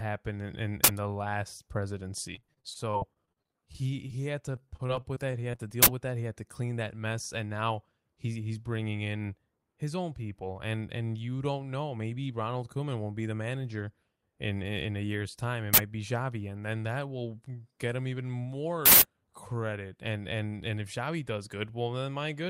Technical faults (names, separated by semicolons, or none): uninitialised buffer; repeated packet loss (robotic sound); jitter buffer speed-up